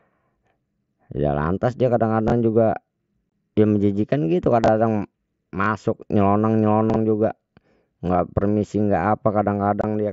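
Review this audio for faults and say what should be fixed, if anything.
Chunks out of order: at 2.28, 4.64 (right after "dia menjijikkan gitu"), 5.62 and 6.9 s the speech briefly jumbles. A 20 ms chunk plays one slot late, two slots at 6.9 s, leaving hard joins. Fix the jitter buffer so late chunks get reordered by sequence number instead of just appended.

Unconcealed Bluetooth headset packet loss: short holes with abrupt edges at 3.32 s (just before "dia menjijikkan gitu") and at 9.81–9.84 s, each about 22.5 ms, which fits three lost 7.5 ms mSBC frames on the link. The mSBC codec adds a light graininess on loud sounds. Turn on packet loss concealment and reduce radio interference or distance to the headset.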